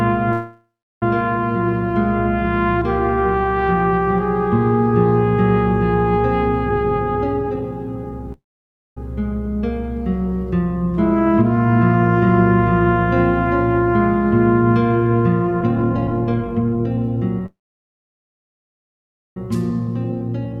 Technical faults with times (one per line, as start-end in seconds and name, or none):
0.32-1.03 call audio freeze
6.65-8.28 jitter buffer speed-up
8.33-8.97 call audio freeze
15.61-17.41 jitter buffer speed-up
17.46-19.37 call audio freeze
19.55-20.60 jitter buffer speed-up